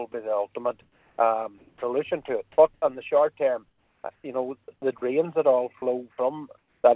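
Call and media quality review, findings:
Sound dropped by the voice detector, 0.12 to 0.14 s: sender VAD likely misread quiet sound as background and halted transmission. About 10 ms of real sound lost, 20 ms filled by comfort noise.

Sound chopped by the voice detector, 0.82 to 2.82 s: sender VAD likely toggled between sending and muting repeatedly. About 700 ms of the two seconds replaced by comfort noise. Result is choppy sound with holes.

Sound chopped by the voice detector, 3.68 to 4.68 s: same likely VAD on/off cycling at the sender. About 440 ms within this second swapped for comfort noise, so quieter portions break up.

Comfort noise in place of the background, 6.58 to 6.84 s: sender likely entered discontinuous transmission during the pause, receiver generated 260 ms of synthetic fill. Real background, about 48 dB under the loudest sound, becomes smoother steady noise at an unchanged level.

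Path runs G.711 mu-law at 64 kbps, with nothing above 4 kHz.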